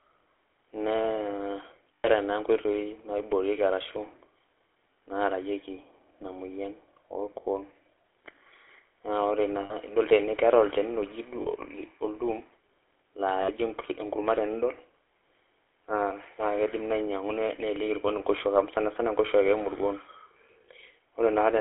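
Throughout, the GSM full-rate codec gives the speech a buzzy, gravelly roughness confined to roughly 300 Hz to 3.4 kHz, which fits 13 kbps pulse-excited coding. Lost GSM frames at 1.94–2.09 s, 9.60–9.74 s just after "na ore na", 11.42–11.47 s and 13.42–13.51 s are filled by repeating the last good frame, heard as brief metallic rings.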